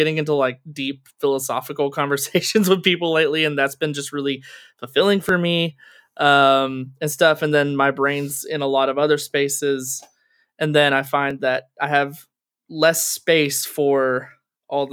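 Overlapping chunks cause a brief click at 2.29, 5.29, 8.30, 11.31 and 14.31 s. Each 3.0 s chunk starts early, so 6.5 ms plays twice at every join.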